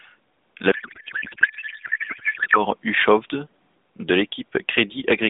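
A speech clip carried over AMR narrowband, with the band limited to roughly 150 Hz to 3.7 kHz and light buzziness fitting the 12.2 kbps mode. From 0.72 to 2.65 s a codec payload misread replaces the speech with garbled warble: octet-aligned AMR frames are being unpacked as bandwidth-efficient, so every field lands in the wrong bits.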